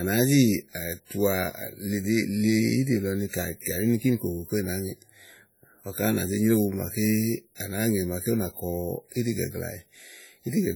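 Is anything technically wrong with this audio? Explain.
Yes. Throughout the speech there is heavy transform-codec damage, most likely WMA compression at a low bitrate, something near 32 kbps. Blocks of quantisation noise smear across tens of milliseconds and weak components drop out, giving a ringing, washy hiss that swells with the voice. On a spectrogram this shows as patchy, blocky energy with holes between strong lines, though content still reaches about 20.1 kHz.

Pre-echo occurs from 7.55 to 7.60 s. A sharp attack late in a codec block lets noise sized for the loud part fill the preceding quiet, so about 50 ms of hiss leads the onset, softening it. The waveform shows a low noisy ramp before the transient; the spectrogram shows a broadband smear ahead of it.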